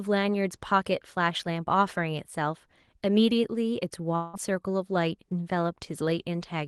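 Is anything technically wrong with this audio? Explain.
Yes. From 4.15 to 4.36 s there is a long network dropout, likely caused by lost packets. About 180 ms of speech never arrives, and the receiver fills the gap by stretching the last sound into a fading buzz. The speech then resumes with that portion missing. On a spectrogram the harmonics smear into a blurred, decaying band that carries no new detail. The waveform shows no true silent gap, only a softening envelope. The call path's Opus coding, which cuts off content above 12 kHz, is also present around it.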